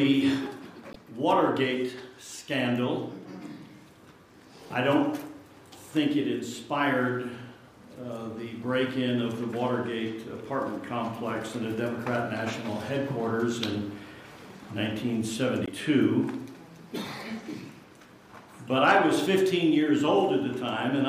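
Damaged data in a compressed stream appears twice, at 0.90 to 0.96 s and at 15.65 to 15.69 s. Corrupted bytes make the decoder misread those frames and lose sync until it finds the next valid frame header, leaving a brief glitch each time.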